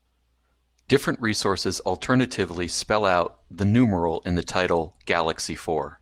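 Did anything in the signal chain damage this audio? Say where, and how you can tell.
No, the speech shows no audible damage from any stage of the signal chain.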